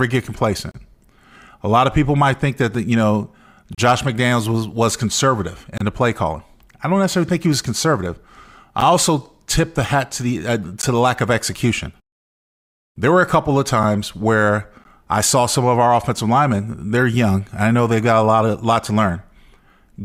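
Short silent holes with hard edges break into the speech at 0.71–0.74 s, 2.74 s, 3.75–3.78 s, 5.78–5.81 s, 8.80 s, 10.82 s, 13.83 s and 14.84 s. Each is a gap between stream segments: the timestamps of adjacent one-second segments don't meet, so the player inserts silence lasting about 4 to 31 ms. Unlike a packet dropout, nothing is missing. The speech pauses and then resumes intact, and every hole lands on a boundary between one-second segments.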